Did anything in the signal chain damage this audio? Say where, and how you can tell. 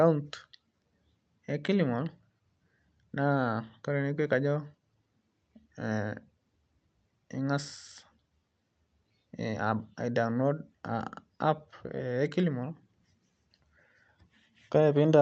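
No, nothing in the chain damaged this audio: it went through an Opus call path at 32 kbps, and its 8 kHz bandwidth limit and coding texture are what that codec does in normal operation.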